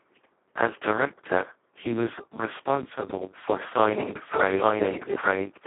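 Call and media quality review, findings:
Speech hoarse, buzzy and near-robotic throughout, band roughly 200 Hz to 3.4 kHz, nothing above 3.8 kHz. Speex codec at its lowest quality; damage points to a roughly 2 kbps mode, with too few bits for the excitation, approaching vocoder output.

From 3.91 s, after "he was responsible for", to end: a second full-band copy at about equal level, about one second behind, with no decay or room colour and an abrupt entry. Doubled audio track, likely a second capture path.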